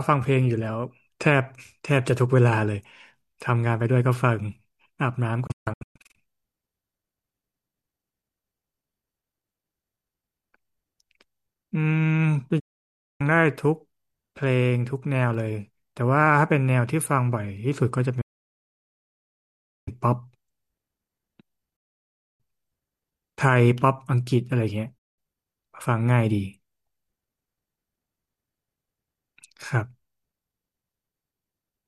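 Five digital broadcast dropouts hit this speech, each one the receiver muting on bad frames. At 5.47 s it's a spatter of short holes across about 0.67 s. Then come clean gaps at 12.59 s (0.6 s), 18.21 s (1.66 s), 21.76 s (0.62 s) and 24.98 s (0.19 s). Each snaps off in about 8 ms.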